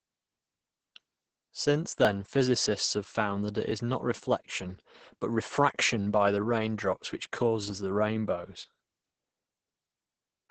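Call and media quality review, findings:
Opus voice compression, whole clip: speech muffled, hoarse, slightly robotic. Nothing above 8 kHz; SILK linear-prediction coding in wideband mode with coarsely quantised excitation, consistent with roughly 10 kbps. Heavy codec damage across the entire speech signal.

Skip forward in the speech at 2.05 s, around 10 ms of audio missing, no gap of silence. Likely a dropped buffer (overrun): samples overwritten before the capture path read them, leaving both sides spliced together. Second, larger skip at 3.71 s, roughly 20 ms lost, the same jump pattern.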